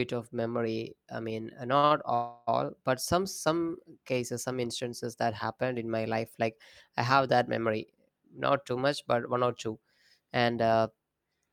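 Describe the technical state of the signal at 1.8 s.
At 1.8 s the speech hits a short stall from a late packet, and then a second one straight after it. The first runs from 1.77 to 1.85 s. The second runs from 1.85 to 1.92 s, just after "memory I mean uh". Each time a packet arrived late and the jitter buffer ran dry. The receiver held the last sound for about 56 ms and then 54 ms. Nothing is lost. The sound drags unnaturally with a faint buzz or dip.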